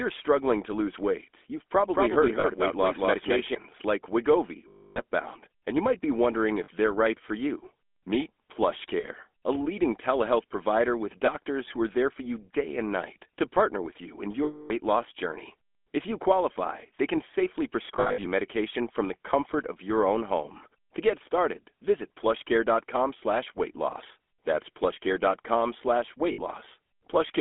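Throughout, the speech has a buzzy, gravelly roughness and a narrow telephone band of about 250 Hz to 3.4 kHz. This is plainly audible GSM full-rate codec damage, which fits the 13 kbps coder's pulse-driven vocal-tract model and its coarse excitation.

From 1.93 to 3.55 s, a second, equally loud copy of the speech trails the first by roughly 200 ms. It starts and stops abruptly, with no room colour. This doubled audio track likely comes from the signal being captured twice through paths of different speed.

Short metallic rings and held, rough tones interrupt the speech at 2.40–2.46, 4.68–5.00, 6.64–6.69, 9.00–9.06, 11.26–11.29, 14.44–14.71, 17.96–18.26 and 26.32–26.40 s. These are lost GSM frames. In each gap the decoder repeated the last good frame. The 280 ms gap at 4.68 s and the 260 ms gap at 14.44 s are the longest. The 17.96 s stretch is scattered, with its longest run around 70 ms.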